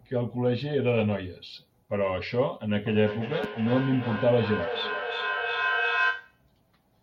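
Two devices on the same call in one room form a feedback echo: one plays what the other's microphone sent, and that microphone picks it up again, which neither echo canceller removes because each handles only its own device's output. In this speech recording, from 2.86 to 6.46 s, each word comes back roughly every 300 ms, thinner and more ringing, with the loudest repeats reaching about 2 dB below the speech itself.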